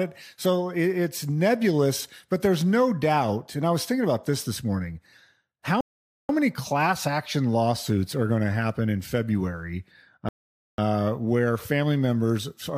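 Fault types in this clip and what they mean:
Rebuffering stall: the player exhausted its downloaded audio and paused until more data arrived, so the speech drops to silence at 5.81–6.29 s and again at 10.29–10.78 s, then picks up exactly where it left off. Each pause adds about half a second (0.48 s and 0.50 s) without losing any content. On a waveform these are flat, silent gaps; on a spectrogram they are blank vertical bands with sharp edges on both sides.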